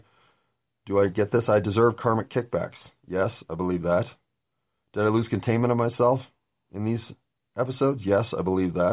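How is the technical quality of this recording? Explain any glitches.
No glitches can be heard anywhere in the recording. The speech continues without any audible technical problem, so there is nothing to explain.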